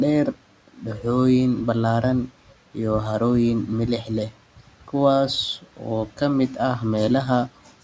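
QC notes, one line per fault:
4.57–4.94 s, 5.62–5.83 s, 6.07–6.21 s and 7.48–7.74 s, speech cut by the noise suppressor: each time the suppressor mistook quieter parts of the speech for background noise and pulled them down by up to about 12 dB. Each dip lasts only about 0.1–0.15 s, leaving those sounds swallowed and faint against the room noise.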